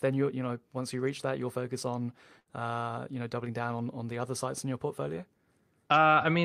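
At 2.39 s the speech breaks up in a burst of packet loss lasting until 2.49 s. A short run of audio packets never arrived in time. The receiver filled the gap by stretching the last sound it had, fading it as it went. That fill runs for about 65 ms and sounds like a brief held buzz or hiss. When the speech resumes, about 40 ms of it is simply gone.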